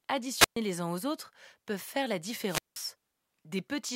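Wireless microphone squelch dropouts occur at 0.37 to 0.57 s, just before "les uns aux autres", and at 2.41 to 2.92 s, right after "autres peuvent faire la". In each, the analogue FM radio link weakens until the receiver's squelch shuts the output, so a short rise of hiss or static gives way to a near-silent hole, about 124 ms the first time and 181 ms the second, before the speech comes back.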